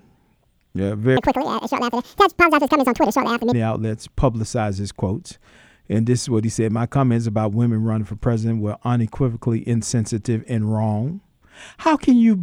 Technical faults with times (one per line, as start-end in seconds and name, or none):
1.17-3.52 audio read two samples at a time (double speed)